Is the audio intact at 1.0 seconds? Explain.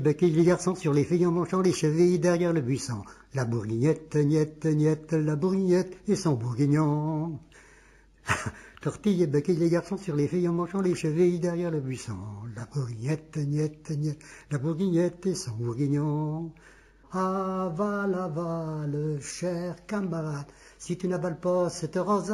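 No. At 1.0 seconds, as throughout, there is imaging from linear upsampling. The rate was raised by straight-line interpolation, which points to a 16 kHz source taken to 44.1 kHz. That weak filtering dulls the top and leaves a mirrored image between 8 and 16 kHz, roughly 30 dB down, heard as faint metallic shimmer.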